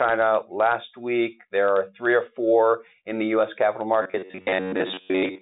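Right at 4.02 s, and running to the end at 5.42 s, the speech collapses into a stiff, metallic buzz pitched at about 94 Hz. That's the robotic sound from repeated short buffers, likely caused by audio arriving too slowly, so the software keeps replaying a tiny slice of roughly 10.7 ms to fill gaps. Most of that stretch is repeats rather than fresh audio, all squeezed through the G.726 phone band, which tops out near 3.8 kHz.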